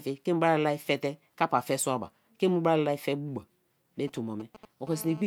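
From 4.08 to 4.89 s, GSM signalling bursts break in: a galloping dit-dit-dit of short buzzes at the 217 Hz burst rate, roughly 20 dB under the speech. A nearby 2G phone's intermittent radio bursts are being rectified by the audio circuitry. The broken, grouped rhythm marks it as signalling rather than an active call.

From 4.91 to 5.22 s the pattern turns into a continuous GSM phone buzz: a hard, raspy 217 Hz tone rich in harmonics, about 19 dB below the speech. Here the phone is transmitting steadily as in a call, so the rectified pulses no longer arrive in separate clusters and instead form an unbroken buzz that has nothing to do with the speech.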